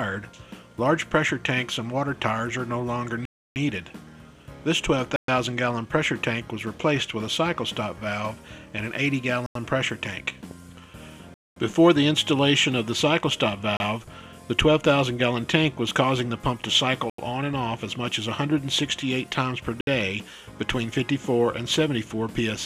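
The sound drops to dead silence seven times, at 3.25 s (0.31 s), 5.16 s (0.12 s), 9.46 s (0.09 s), 11.34 s (0.22 s), 13.77 s (0.03 s), 17.10 s (0.09 s) and 19.81 s (0.06 s), each time resuming abruptly. These are likely Bluetooth stalls, where delayed packets let the headphones' buffer run empty.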